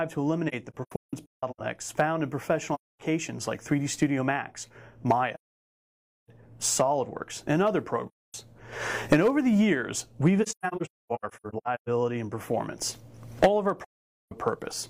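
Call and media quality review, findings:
AAC frame loss with muting: soft-edged dropouts at 0.48–1.61 s (broken into short gaps, longest around 150 ms), 2.74–3.01 s, 5.34–6.30 s, 8.07–8.35 s, 10.42–11.89 s (scattered, longest around 300 ms) and 13.84–14.33 s. Decoder zeroes lost frames; overlap-add windows ramp audio out and back in. Spectrogram: full-band vertical blank columns with tapered edges. Waveform: envelope fades to flat silence, then recovers.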